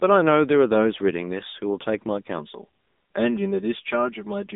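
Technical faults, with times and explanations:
Throughout: AMR narrowband mobile codec. The speech has been squeezed through a 2G/3G-style vocal-tract model at around 7.95 kbps, passing only about 200 Hz to 3.7 kHz with nothing above 3.8 kHz, so it sounds muffled, buzzy and plainly synthetic.
2.39–4.56 s: channel delay (comb filtering). One channel lags the other by roughly 5 ms before both are summed to mono, so shared content cancels at evenly spaced frequencies starting near 100 Hz, leaving the speech hollow and phasey to the end.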